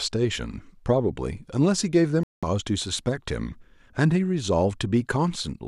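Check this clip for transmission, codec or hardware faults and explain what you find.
One fault stands out in this speech. From 2.23 to 2.43 s there is a digital broadcast dropout: the receiver rejected corrupted frames and muted, leaving about 0.2 s of silence, which fits roughly eight lost frames. Unlike concealment, nothing is patched in, and the speech resumes later in the timeline instead of continuing seamlessly.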